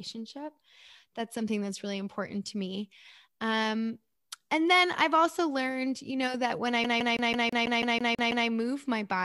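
From 6.84 s to 8.48 s, right after "know that when I", the speech locks into a rapid, even stutter: a slice of about 0.16 s repeats ten times, each pass cut by a tiny mute, before the audio resumes at "move my body". This is the CD stuck on one turn fault. A scratch knocks the laser back one track at the same point on every rotation, so the player keeps rereading that same short fragment.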